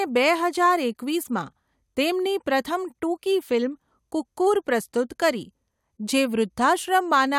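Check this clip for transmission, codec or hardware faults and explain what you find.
No faults can be heard anywhere in the speech. There is nothing to report for any part of the recording.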